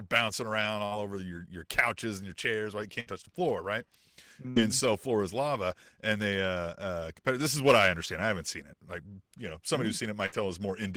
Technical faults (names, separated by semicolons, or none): burst of packet loss